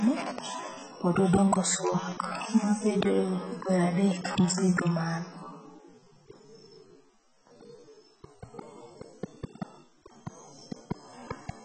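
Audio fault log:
Throughout: low-bitrate audio saved at a high bitrate. The speech carries nothing above 8.6 kHz and has the artefacts of heavy compression. The likely cause is a very low-bitrate encode later re-saved at a high MP3 bitrate, which cannot restore the removed detail.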